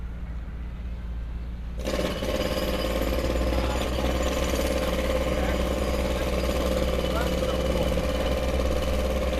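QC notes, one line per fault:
Nothing stood out on listening to these sounds.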